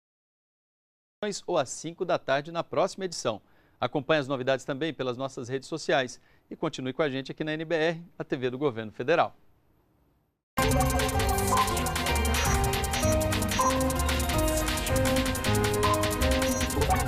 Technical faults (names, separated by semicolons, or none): cut-off start